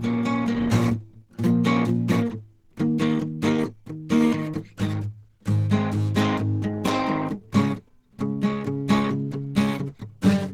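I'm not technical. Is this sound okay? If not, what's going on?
No. Throughout the music, the sound is rough, grainy and hoarse, as if the instruments were smeared with hiss. That is likely Opus compression squeezed too hard, so the encoder switched to a speech-oriented mode and filled in missing detail with noise.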